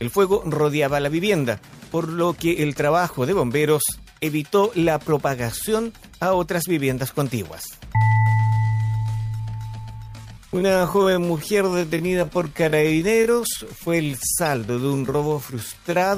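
A time-stretched section runs from 8.05 s to the end, where the pace drops abruptly to 0.69 times the original while the pitch holds steady. The slowed audio drags, likely because software lengthened it by repeating short fragments to fill extra time.

Damaged data in a compressed stream appears from 14.46 to 14.48 s as a brief glitch. Corrupted bytes there threw the decoder out of sync, so it misread the frames and skipped ahead to the next valid frame header.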